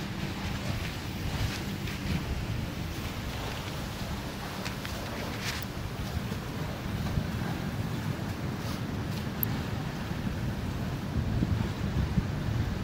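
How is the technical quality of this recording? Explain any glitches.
The recording has two brief electrical switching spikes, sharp snaps laid on top of the sound at 5.63 s and 9.43 s, the second louder, peaking near -10 dBFS against roughly -15 dBFS. Each is likely a nearby switch or discharge arcing, with the audio line picking up the burst.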